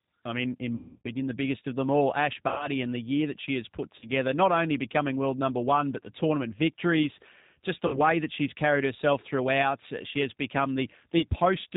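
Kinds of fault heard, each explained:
G.729 codec: speech rebuilt at 8 kbit/s from a filter-and-pulse model sounds rough and synthetic, with nothing above 4 kHz, unlike smooth plain band-limiting.
VoIP packet loss concealed by the speech codec: gaps, worst after "I mean in", become a fading buzzy extension of the last sound rather than silence or clicks, and the voice stays weak briefly afterwards.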